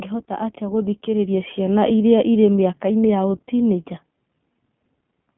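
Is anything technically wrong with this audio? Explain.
Yes. Throughout, the speech sounds thin and slightly rough and synthetic, confined to a telephone band of roughly 150 Hz to 3.4 kHz with the codec damage plainly audible. That is the iLBC codec: each short frame's excitation is coded on its own, and the character fits its 20 ms, 15.2 kbps mode.

From 0.26 to 1.96 s, the voice and the background swell together by about 7 dB. This is automatic gain rising: the gain control judged the input too quiet and raised its gain gradually over that stretch.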